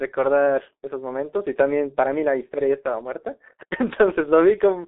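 Throughout the speech, G.723.1 codec damage is heavy: nothing survives above 3.8 kHz, and the voice sounds hoarse, with smeared consonants. Unlike a plain 300 Hz to 3.7 kHz telephone band limit, the roughness points to a slow-updating low-bitrate coder near 6 kbit/s.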